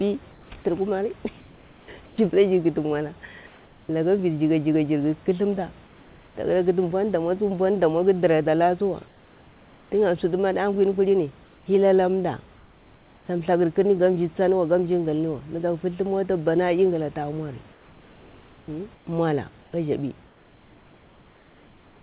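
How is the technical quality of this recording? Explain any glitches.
The recording has one recurring fault: comfort noise in place of the background during pauses. The band-limited call sound, with nothing above 4 kHz (consistent with G.711 narrowband coding), and room noise about 30 dB below the speech can also be heard.

The comfort noise occurs at 0.32 to 0.5 s, 1.4 to 2.18 s, 3.47 to 3.89 s, 5.87 to 6.35 s, 9.08 to 9.92 s, 11.45 to 11.66 s, 12.56 to 13.28 s, and from 17.72 s to the end. This is likely discontinuous transmission: the sender stops sending when no speech is detected, and the receiver generates its own noise to fill the gap. In each pause, the real room sound gives way to a flat, textureless hiss, about 1 to 3 dB quieter, which then switches back when speech resumes.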